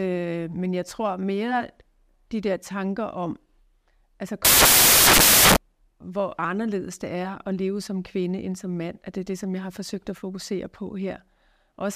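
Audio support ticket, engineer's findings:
Samples built from the wrong bytes, 4.45–5.56 s: loud white noise over speech; byte order or alignment misread in decoder, low bits dominating. Spectrogram flat broadband wash.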